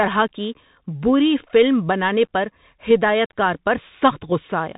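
From start to finish the speech sounds boxed-in and telephone-like, with nothing above about 3.8 kHz, a granular hiss beneath it, scratchy s sounds and gritty distortion on loud, bright moments. This is the Bluetooth CVSD headset codec. Each sample is a single up-or-down bit with an adapting step, consistent with a 64 kbps link. Sharp high-frequency movement outruns the step size, and the damage is plainly audible.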